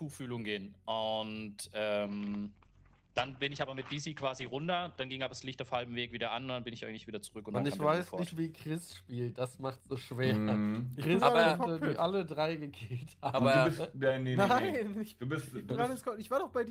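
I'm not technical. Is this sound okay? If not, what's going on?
No. From about 2.1 to 7.27 seconds there is a call bitrate drop. The call's connection seemed to weaken, so the software squeezed the sound into far less data. The sound turns rough and muffled. The crisp top end, everything above about 8 kHz, disappears. It is at its worst for about 3.4 seconds of that stretch. After about 7.27 seconds the data rate recovers and the brightness returns.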